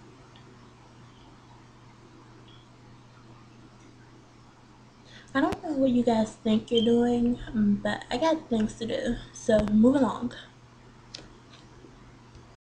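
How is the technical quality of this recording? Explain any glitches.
Loud pops break through the sound, at 5.52 to 5.55 s and at 9.59 to 9.70 s, where a pair of pops lands in quick succession. Each is a sharp thump roughly 10 dB above the programme, which continues beneath it. The likely cause is a sudden voltage step, such as a plug, switch, static discharge or driver glitch, shaped by the following circuits. A waveform shows tall isolated spikes, and a spectrogram shows thin full-height vertical stripes.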